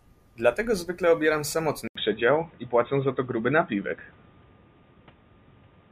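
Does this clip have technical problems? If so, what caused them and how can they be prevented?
Yes. At 1.88 s the speech drops out for about 80 ms, then returns duller and boxier through to the end, with nothing above 3.8 kHz, a small shift in level and a faint new background noise well below the speech. The likely cause is an input switched to a poorer device, such as a headset's narrowband call profile, replacing the original microphone mid-recording. Lock the input device for the whole session and turn off automatic device switching.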